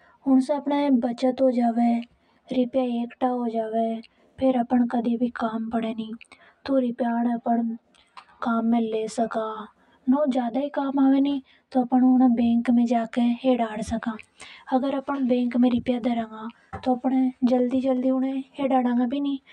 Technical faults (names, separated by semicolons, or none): channel delay (comb filtering)